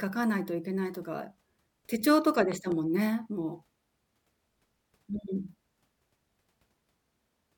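A sudden voltage spike, likely from a plug, switch, static discharge or driver glitch, enters the signal path at 2.52 s and is shaped by the circuitry downstream. The result is a loud pop: two sharp pops in quick succession between 2.52 and 2.74 s, peaking around ten decibels above the speech. The speech continues underneath without a break, with the pops sitting on top of it.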